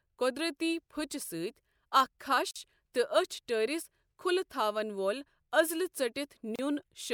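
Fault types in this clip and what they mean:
Gap at a join of encoded pieces: separately encoded pieces were joined without trimming encoder delay and end padding, so short silences open in the speech, about 46 ms at 2.51 s and 32 ms at 6.56 s, with smeared edges, four seconds apart, before the sound resumes where it stopped.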